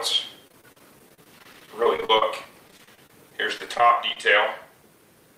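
From 0.47 to 4.17 s there is repeated packet loss, heard as robotic sound. Dozens of short gaps, the longest 40 ms, are bridged by stretching the preceding sound. Concealment covers roughly a sixth of the stretch, leaving it choppy.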